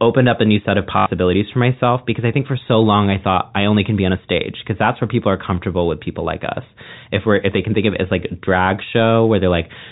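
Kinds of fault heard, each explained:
Packet loss with last packet repeated: from 0.98 to 1.06 s, after "a new set of", one packet loops for 80 ms, a stutter buzzing near 50 Hz.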